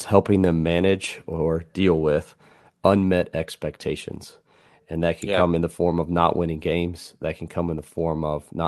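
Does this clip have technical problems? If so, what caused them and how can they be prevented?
No, there are no technical problems to report here.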